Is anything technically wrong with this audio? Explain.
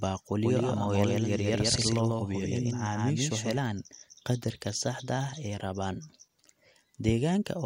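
Yes. From 0.44 s to 3.58 s there is a doubled audio track. A second copy of the speech runs about 150 ms behind the first. It sits roughly 5 dB quieter. The copy is full-band and dry, with no decay or room colour, so it is not an echo. It starts and stops abruptly at those times. The likely cause is the signal being captured twice, once through a slower path.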